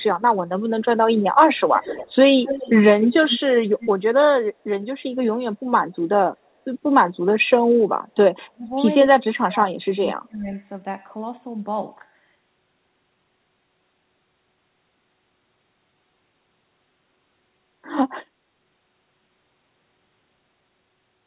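Echo leak at 1.56–2.15, 2.44–2.70, 3.01–3.57 and 3.77–3.90 s: a delayed copy of the speech trails 226 ms behind, faint to fairly strong, likely slipping past a loudspeaker-side echo canceller.

Speech suppressed in double talk at 8.44–8.76 and 9.13–10.50 s: the speech sinks by around 30 dB, likely because the canceller could not tell it from the echo while both sides talked.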